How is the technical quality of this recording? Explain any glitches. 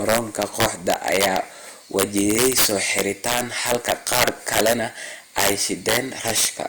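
Quality's poor, mainly because of integer overflow running through the whole speech clip. The signal was pushed about 10 dB too hot, and instead of limiting, the loudest peaks, roughly one percent of samples, wrap round to the opposite extreme, giving harsh, violent cracks far sharper than ordinary clipping.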